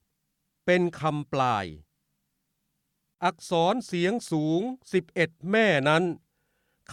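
No technical faults are audible anywhere in the clip.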